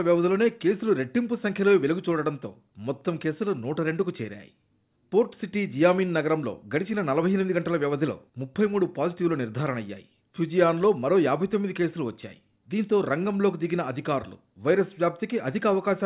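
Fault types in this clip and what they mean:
No technical faults can be heard in this clip. There is nothing here that calls for a fault description.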